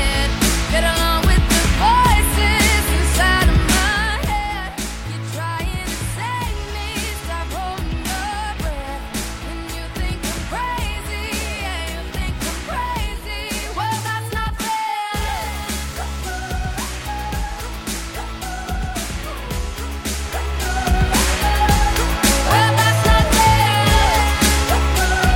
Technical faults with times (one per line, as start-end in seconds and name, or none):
none